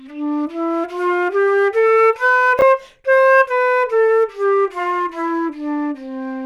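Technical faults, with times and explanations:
2.59–2.62 s, chunks out of order: one 10 ms chunk plays two chunks late. Nothing is missing, but three hard joins cause a brief jumbled moment.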